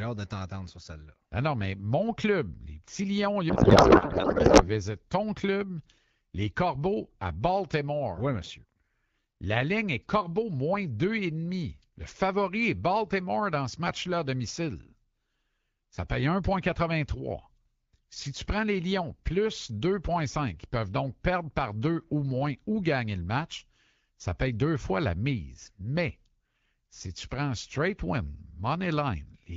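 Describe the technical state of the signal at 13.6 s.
At 13.6 s the speech is intact with no fault present, passing through the AMR wideband (HD Voice) codec at 12.65 kbit/s, a rate at which this codec keeps speech clear.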